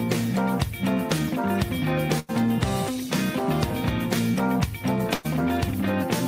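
At 2.19 s and again at 5.15 s, a burst of packet loss cuts in. Each time, the last sound is held and fades for about 90 to 100 ms. Playback then resumes, with roughly 80 ms and then 100 ms of audio skipped.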